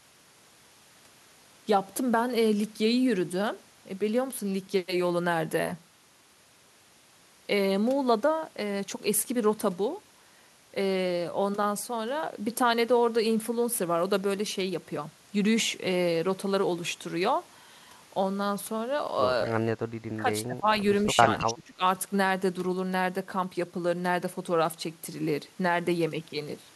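Speech suppressed in double talk, from 19.92 to 20.27 s and again from 20.46 to 20.67 s: the voice drops by around 20 dB in two short holes. This is likely an echo canceller turning down its own talker while the far side spoke at the same time.

Echo leak, from 21.39 to 21.46 s: a brief, faint copy of the voice returns 218 ms late, around 15 dB below the speech. It is likely a loudspeaker-side echo canceller letting a scrap of microphone pickup slip back into the call.

Speech suppressed in double talk, from 21.47 to 21.83 s: immediately after that echo, the voice sinks again for roughly 0.4 s, this time by around 25 dB, the deepest of the three dips.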